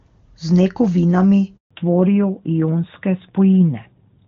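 Speech recorded over a mobile call, opening in clear HD Voice (AMR-WB) before two faults appear. A handover gap runs from 1.57 to 1.71 s: the sound drops out for about 140 ms as the call switches networks and no frames arrive until the new link carries audio. From 1.71 s to the end there is a fallback to narrowband. Everything above 4 kHz disappears, consistent with a switch to a narrowband AMR codec, leaving the speech duller and rougher than the wideband opening.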